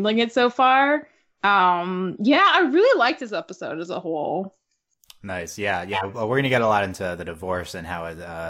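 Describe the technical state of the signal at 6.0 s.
Corrupt frame decoded, 5.93 to 6.05 s: damaged compressed data was played anyway, spraying misplaced energy into a loud, roughly -5 dBFS burst spanning what sounds like two frames.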